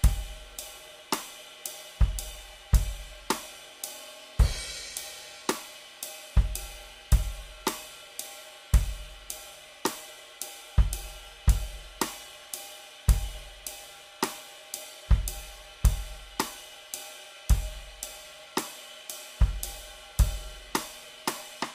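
No technical faults are audible.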